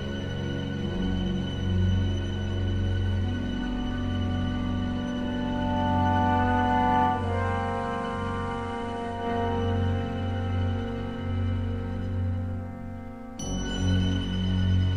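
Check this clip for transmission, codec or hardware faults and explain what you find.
One fault: digital radio blending to analogue, from 7.04 to 9.29 s. The receiver lost its digital stream and cross-faded over 200 ms to the station's FM broadcast, then back. The level drops about 4 dB, and hiss sits roughly 30 dB under the sound.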